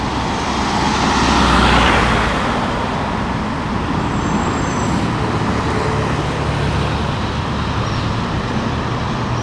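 The signal holds steady throughout, with no technical faults to be heard anywhere in the recording.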